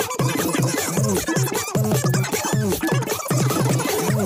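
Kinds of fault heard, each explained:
Wrong sample rate: the samples are clocked out far faster than they were captured, with no conversion, so everything runs about 2.76 times too fast and sits about 17.6 semitones high, nearly an octave and a half. That ratio fits audio recorded at 16 kHz being played back at 44.1 kHz. You hear it the whole way through as a squeaky, chipmunk-like rush, with timing and pitch pushed up together.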